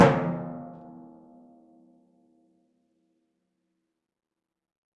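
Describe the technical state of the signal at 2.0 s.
At 2.0 s the music plays through intact, with no audible fault.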